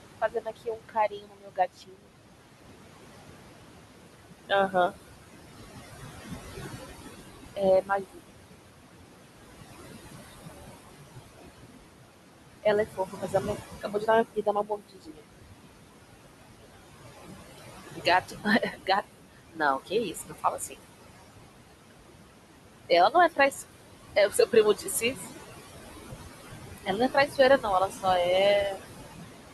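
Noise suppressor artifacts run through the whole clip. The suppressor pulls the steady background down by about 20 dB frame by frame, so the room noise, which sits only about 9 dB below the speech, dips between phrases and swells under them. That pumping with the talker's rhythm separates it from the room noise itself, which stays level.

Speech cut by the noise suppressor occurs at 0.21–2.1 s, 4.48–4.93 s, 7.56–8.21 s, 12.63–15.21 s, 17.58–20.76 s, 22.89–25.27 s and 26.78–28.05 s. Here the suppressor mistakes quiet speech for noise and turns it down by up to about 22 dB (13 dB in the last stretch). Roughly 0.7 to 1.5 s is lost in the longer spans and a fraction of a second in the shorter ones. Consonants and endings sound swallowed, not cut off, which separates these drops from dropouts or gating.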